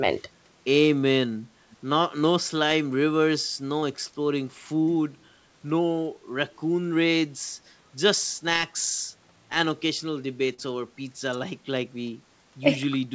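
At 1.71 to 1.77 s, a brief, very faint copy of the speech surfaces, roughly 30 dB below the main signal and trailing it by about 366 ms. This is most likely an echo leak: the far end probably played the call through a loudspeaker, and its echo canceller let a scrap of that pickup return. On a spectrogram it appears as a weak, smeared duplicate of earlier formant patterns. In the waveform it is a small ripple riding under the speech.

From 10.54 to 10.60 s, short concealed packet loss leaves about 40 ms of audio missing, with roughly 37 ms of it filled by the receiver's concealment extrapolating from the preceding sound before blending back into real audio. It is heard as a momentary smear or wobble. A spectrogram shows harmonics or noise stretched flat across the gap with a soft seam at the rejoin, all beneath the 8 kHz ceiling that is consistent with a wideband call codec.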